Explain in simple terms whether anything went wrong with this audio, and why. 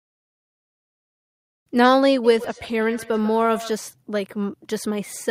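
Between 2.24 and 3.79 s there is a feedback echo between two devices. Each bit of speech comes back as a fainter, thinner copy, spaced roughly 150 ms behind it. Two devices in the same room are on the call, and one device's microphone picks up the other's loudspeaker. Each echo canceller only removes its own device's playback, so this sound slips through. It differs from ordinary room reverberation because you hear distinct, evenly spaced repeats, not a smooth tail.

At 2.44 s, in the middle of that echo, there is a skip ahead. Roughly a third of a second of speech is simply missing, and the sound on either side is joined almost directly, with no silence. The playback queue had to drop a stretch of audio while later audio was already waiting. That missing silence is what sets it apart from a dropout, where the sound stops and leaves an audible hole.

From 4.44 s to the end there is a jitter buffer speed-up. 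The receiver had built up more delay than it wanted, so it trimmed tiny slices out of the speech, about 40 ms in total. As a result the speech plays at about 104% speed. The pitch stays the same, which is how you can tell it apart from a tape-style speed change, where the pitch would rise too.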